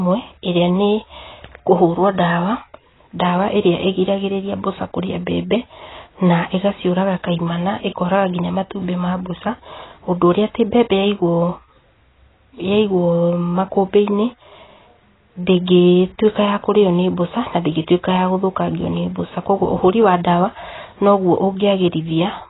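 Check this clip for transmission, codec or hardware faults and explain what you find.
AAC compression runs throughout the speech, and the damage is heavy. Nothing survives above 3.9 kHz, a hard ceiling that points to a very low bitrate, around 16 kbps, where the encoder has likely cut the top band to spend its few bits on the lower spectrum. Within each frame, coarse quantisation leaves gaps and rough patches across the remaining frequencies, so the speech sounds muffled and smeared, with a warbling, fizzy edge on sustained sounds and sibilants.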